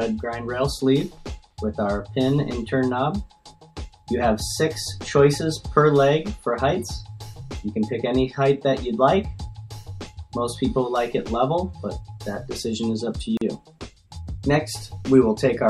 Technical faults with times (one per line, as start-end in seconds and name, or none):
13.37-13.41 gap at a join of encoded pieces